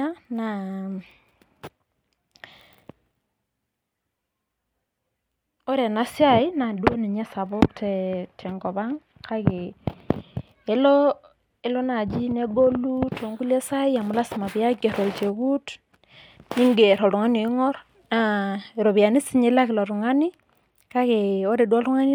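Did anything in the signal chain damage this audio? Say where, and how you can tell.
No, nothing in this speech recording stood out as damage from any stage of the signal chain on listening.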